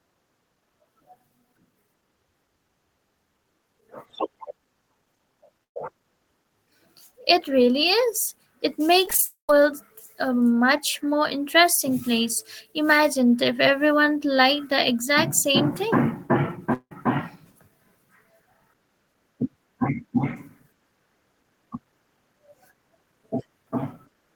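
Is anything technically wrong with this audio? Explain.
Yes, the audio is affected by network packet loss in three forms.

Burst of packet loss, 5.64 to 5.77 s. A short run of audio, about 120 ms, never arrived or came too late to play. The receiver filled the hole by extending the last sound and fading it down. Here it decays to near silence for most of the gap, so the speech briefly thins into a fading tail and then jumps ahead with a small piece missing.

Repeated packet loss (robotic sound), 9.06 to 9.23 s. Five short holes, none longer than 15 ms, fall in quick succession, and about 30% of this span is patched rather than real. Each patch repeats the preceding sound, and the next hole arrives before the speech recovers. About 50 ms of audio is lost in total, and the stretch sounds choppy.

Long network dropout, 9.25 to 9.50 s and 16.74 to 16.92 s. In both, audio stopped arriving for a sustained stretch, likely because the connection stalled. 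The first, directly after the robotic stretch, loses about 240 ms; the concealed tail fades out and roughly 130 ms is effectively silent. The second, just after "the exact same thing", loses about 170 ms, with a fading concealed tail and then about 60 ms of near silence before speech resumes further on.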